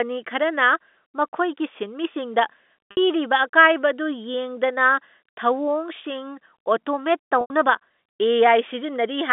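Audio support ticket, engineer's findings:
Packet loss with pitch repetition at 2.91–2.97 s (60 ms) and 7.41–7.50 s (90 ms). Jitter buffer repeating the last pitch period, giving a held buzz before fading. Fits two and three lost 30 ms packets on the G.711 line.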